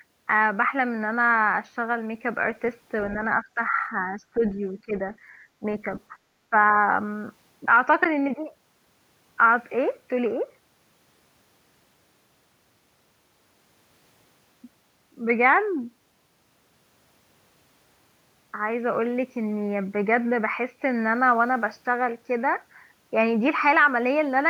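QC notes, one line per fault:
3.42 to 3.72 s and 4.13 to 4.96 s, speech suppressed in double talk: the speech ducks by roughly 10 dB in short patches, briefly in the first stretch and more of the second, so it sounds like it's being pushed down for moments rather than cut cleanly. The likely cause is an echo canceller that heard both ends talking at once, couldn't tell this talker from its own loudspeaker echo, and turned both down.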